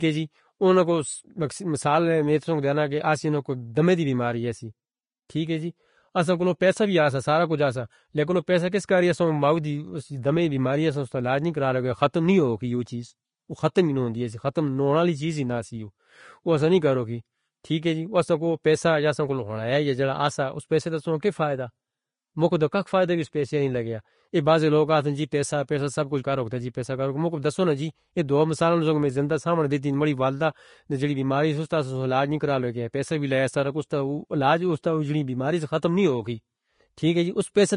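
A speech clip with plainly audible codec damage from start to end. Nothing sounds above 10.5 kHz, so the top of the spectrum is cut away. The remaining treble is hissy and grainy, with fine detail turned to rough noise and attacks blurred. This is likely Vorbis compression at a low setting, and the damage fits a bitrate near 34 kbps. The codec keeps a smooth spectral floor but quantises the fine detail so coarsely that it becomes noise. At 5.29 s there is pre-echo. A short hiss spreads about 10 ms ahead of a sharp onset, softening it. The transform spreads its quantisation noise across the whole block, so noise meant for the loud attack leaks into the quiet moment just before it.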